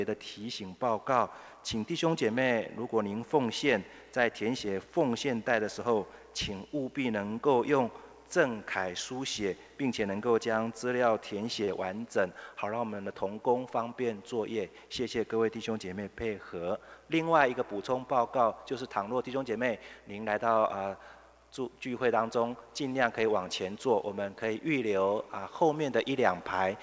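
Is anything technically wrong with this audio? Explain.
Yes. At 11.65 to 11.71 s there is a short stall from a late packet: the jitter buffer ran dry, so the receiver stretched about 30 ms of sound, holding it slightly too long, with nothing lost and a 30 ms added delay. The band-limited G.722 call path, with nothing above 8 kHz, is an expected trait.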